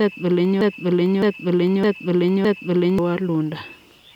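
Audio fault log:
0.61–2.99 s, broken-record loop: a 0.61 s fragment of speech plays four times back to back, identical each pass and with no decay, unlike an echo. The speech that belonged there is gone, likely because playback stalled and kept resending its last buffer.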